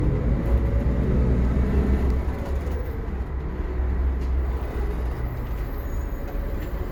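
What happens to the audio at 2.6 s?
At 2.6 s the sound carries the same layered coding artefacts heard across the whole clip, consistent with transcoding between lossy codecs. The combined artefacts likely come from an MP3 stage near 96 kbit/s re-encoded to Opus near 48 kbit/s, with content still reaching 20 kHz.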